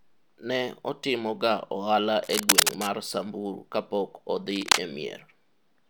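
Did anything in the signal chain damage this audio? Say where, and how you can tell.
Yes. Cable scratch noise hits the speech twice, from 2.24 to 2.87 s and again from 4.51 to 4.80 s. Each time a dense, ragged rustle rides over the speech, somewhat louder than the speech itself. This points to the analogue wiring stage, most likely a worn cable or connector being moved. Its contact resistance jumps about rapidly, and those fluctuations inject the uneven bursts of noise heard here.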